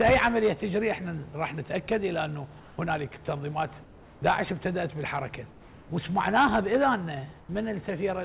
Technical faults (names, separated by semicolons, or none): comfort noise in place of the background